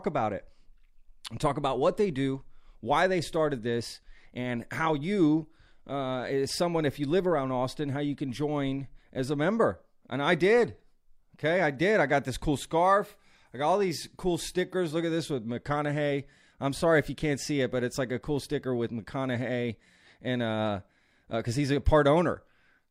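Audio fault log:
Nothing stood out on listening to this speech recording.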